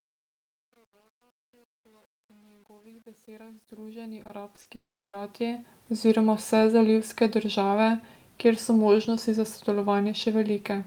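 From 0.0 to 5.9 s, truncation distortion on a fade: the fade-in passes through a stage holding about 9 bits without dither, so the quiet opening, worst until 4.73 s, sounds gritty. At 4.23 to 4.67 s, repeated packet loss leaves four gaps, the longest 40 ms, patched by repeating prior sound, giving a choppy, robotic texture. From 4.75 to 5.15 s, a long network dropout is the likely cause of 380 ms of lost audio: a brief fading buzz or hiss, then about 320 ms of silence.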